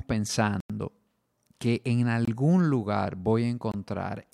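Blocks of digital silence at 0.60–0.70 s, 2.25–2.28 s and 3.72–3.74 s: the speech cuts out abruptly to silence, a 93 ms hole and two 23 ms holes.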